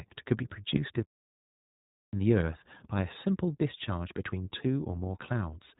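From start to finish the speech carries iLBC codec coloration: nothing above 3.8 kHz survives, and each short frame is coded independently, giving a plainly audible rough, slightly synthetic texture. The character fits 20 ms frames at around 15.2 kbps.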